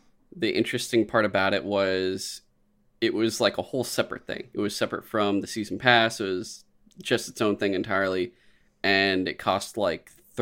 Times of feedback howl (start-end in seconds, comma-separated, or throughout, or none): none